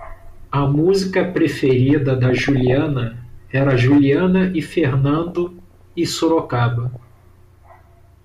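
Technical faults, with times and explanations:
0.65–0.81 s, DAB burbling: a short squelchy bubbling just before "preferida da". Weak reception is letting a fraction of a percent of bit errors slip past the error correction into the MP2 data, so individual sub-bands leap in level for a frame at a time.
2.30–2.89 s, DAB burbling: right after "preferida da" the same mud-like chirping returns, spread over a couple of dozen frames.
5.15–5.96 s, DAB burbling: the longest stretch, nearly a second of sub-band bubbling.
6.85–7.08 s, DAB burbling: a brief final patch of squelches.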